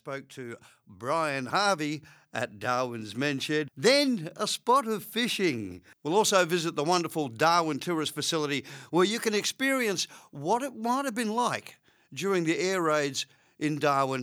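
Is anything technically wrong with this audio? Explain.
Yes. From 0.05 to 2.11 s there is automatic gain rising. The gain control judged the input too quiet and raised its gain gradually, by about 6 dB over those two seconds. The speech and the background swell up together.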